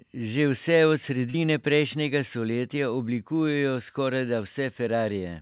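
At 1.30 to 1.36 s, a short concealed packet loss fills about 40 ms with continued sound, heard as a brief smear rather than a silent dropout's hard gap. Everything sits below 4 kHz, which fits a narrowband G.711-style call path.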